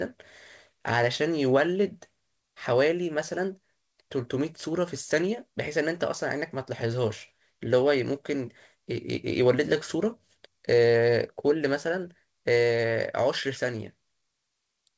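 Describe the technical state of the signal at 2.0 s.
At 2.0 s the speech is intact, with no fault present, only the call path's band limit leaving nothing above 8 kHz, which fits a wideband codec such as G.722.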